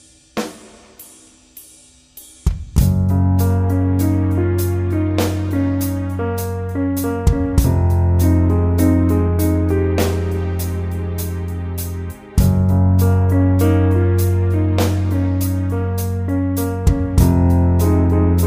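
No technical faults can be heard anywhere in this audio.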